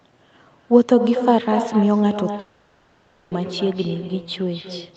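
From the first syllable to the end, every phrase is followed by an echo with no canceller in the path: a second copy about 9 dB quieter, arriving roughly a fifth of a second later. It sounds thinner than the direct sound, like a hollow shadow trailing each phrase. On a spectrogram, each burst of energy has a fainter duplicate shifted right by that fixed lag. In the waveform, onsets are doubled. The copy is band-limited like the main signal, with nothing above 8 kHz.

From 2.39 to 3.33 s the real signal stops for about 0.92 s, most likely a long network dropout in which no packets arrived. The receiver filled the whole stretch, so there is no true silence. Instead the last sound is stretched into a smeared, buzzy continuation that loses its detail. On a spectrogram, the changing harmonic patterns give way to flat, repetitive bands. In the waveform, the envelope turns smooth and periodic. 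At 3.33 s normal audio resumes, with that section simply missing.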